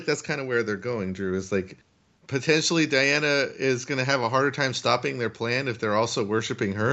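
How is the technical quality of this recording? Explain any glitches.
Nothing stood out as a technical problem on listening to this speech recording.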